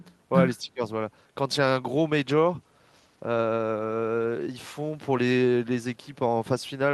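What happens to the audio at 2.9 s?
Nothing goes wrong at 2.9 s; the speech runs through that moment intact, with no dropout, click or other fault.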